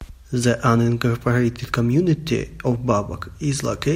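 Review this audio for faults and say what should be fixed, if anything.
Dropped samples at 2.11 s: a single sharp click cuts through the speech there, showing as a thin vertical line across the whole spectrum. A tiny slice of the stream, a fraction of a millisecond, is likely missing, so the waveform leaps straight from one value to a later one instead of travelling smoothly between them. That sudden step spreads energy across all frequencies at once, which is why it reads as a click and not as a gap. To prevent it, give the capture and playback path enough buffer headroom and monitor for underruns so no samples are skipped in transit.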